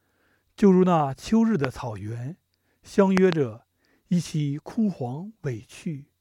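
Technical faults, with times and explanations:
1.65–1.67 s and 3.17–3.35 s, loud pop: a single pop, then two in quick succession, peaking about 15 dB and 20 dB above the speech, likely a voltage pulse from a plug, switch or static. Unlike dropout clicks, the speech continues unbroken underneath.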